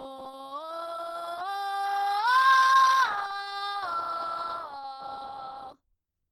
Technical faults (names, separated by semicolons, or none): Opus compression